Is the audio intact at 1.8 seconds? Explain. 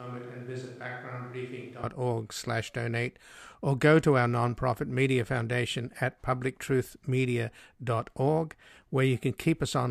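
No. A switch to a distant microphone is under way from the start of the clip to 1.83 s, likely because the close microphone's feed was lost. The speech sounds roomy and hollow, thinner in bass, about 10 dB quieter, with room noise about 30 dB below the speech.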